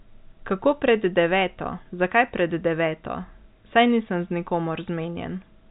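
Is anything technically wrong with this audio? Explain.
No, nothing is wrong: the speech sits inside the expected telephone band with nothing above 4 kHz, and the faint level-following hiss that comes with G.711 A-law coding is just what that format does, not a defect.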